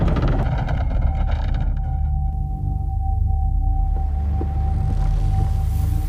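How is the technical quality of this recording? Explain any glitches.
One technical problem stands out, confined to a short stretch near the start.

Channel delay (comb filtering), from 0.43 to 2.33 s: one channel arrives roughly 1.5 ms behind the other, and when the two are folded to mono, whatever they share cancels at regularly spaced frequencies. The first notch sits around 400 Hz, with further notches repeating up the spectrum. The result is a hollow, phasey tone during that stretch, with the fullness of the sound thinned out.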